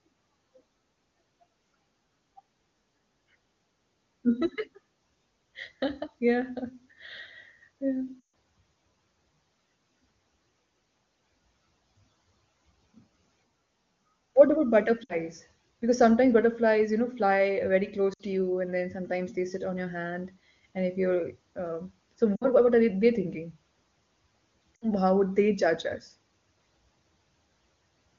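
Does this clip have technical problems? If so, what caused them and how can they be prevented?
Yes. Lost AMR speech frames appear at 8.20–8.29 s, 15.03–15.15 s, 18.13–18.22 s, 22.36–22.45 s and 24.76–24.88 s. Radio errors corrupted frames, so the wideband decoder repeated earlier pitch and vocal tract settings at falling gain. The longest loss, about 140 ms at 8.2 s, and the shorter 60 ms losses each drop to near silence within two frames. On a spectrogram, harmonics smear flat and fade. On the waveform, the envelope sags, then returns weak. Better radio coverage or more robust channel coding in weak signal conditions would prevent these dropouts.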